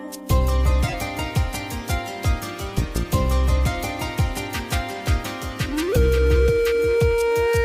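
A short glitch at 0.87 s, lasting about 80 ms and peaking near -15 dBFS, is followed by a longer, quieter glitch from 2.58 to 2.73 s, around -20 dBFS. Both are a corrupt frame decoded: flipped bits in the compressed stream misread gains and codes, scattering energy at wrong frequencies. The first fits a single damaged frame; the second's 140 ms length points to several consecutive frames.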